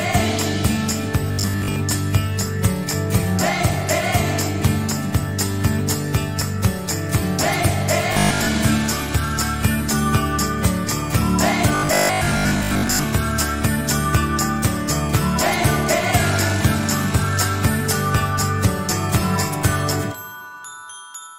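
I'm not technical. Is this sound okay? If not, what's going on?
No. There is robotic sound from repeated short buffers at 1.28 to 1.78 s, 8.13 to 8.47 s and 11.75 to 13.03 s. The sound turns into a rigid, metallic 50 Hz buzz that only roughly follows the original. The likely cause is audio arriving too slowly, so the software loops a 20 ms scrap for most of each stretch.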